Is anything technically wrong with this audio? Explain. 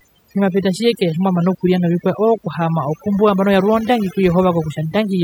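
Yes. Throughout the speech there is overdone noise removal: aggressive spectral gating mutes bands near the noise floor, leaving twinkling near-silent gaps and stripping quiet parts of the voice along with them.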